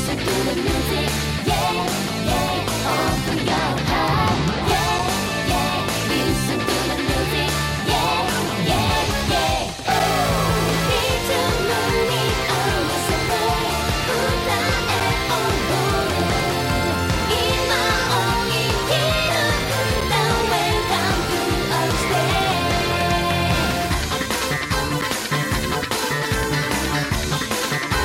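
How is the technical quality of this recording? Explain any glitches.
The recording has one recurring fault, a gap between chunks, at 4.99, 9.99, 15.00, 20.01 and 25.01 s. Every 5 s a hole of about 7 ms of silence is inserted at the join between one chunk and the next, so the sound briefly drops out.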